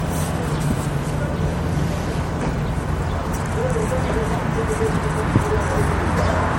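An everyday sound recording that stays swirly, smeared and hollow throughout, with blurred attacks. This is generation loss, likely from about three MP3 passes at a rate fitting 64 kbit/s. The spectrogram shows nothing above 16.6 kHz, plus scattered spectral holes.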